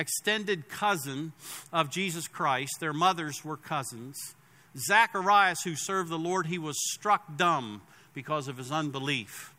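No technical faults can be heard anywhere in the signal.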